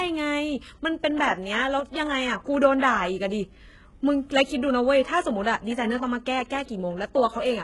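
HE-AAC compression runs throughout the speech, likely at a very low bitrate near 12 kbps. Treble above the coded band is rebuilt from copied lower bands and stops at 11.5 kHz, so s sounds turn gritty and metallic.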